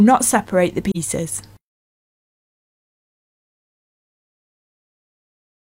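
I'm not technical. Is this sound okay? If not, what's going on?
No. From about 0.91 to 0.97 seconds the sound briefly fades out and back in, leaving a short, soft gap. This is AAC frame loss with muting: a small piece of compressed audio, about one frame, went missing, and the player filled it with silence.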